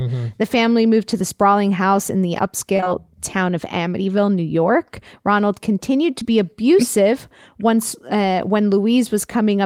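Speech, with short concealed packet loss: a run of three back-to-back 20 ms gaps from 2.77 to 2.88 s, between "sprawling house in the" and "town of", and one more at 6.20 to 6.23 s. The receiver patched each hole by extending the preceding sound, so you get a brief smear there.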